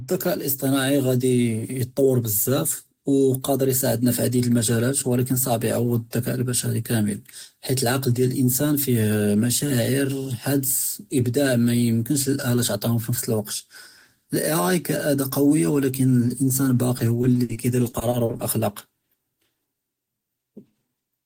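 Repeated packet loss (robotic sound) hits this speech from 16.97 to 18.41 s: twelve gaps of up to 60 ms are each filled by extending the preceding sound, making it choppy with pieces missing.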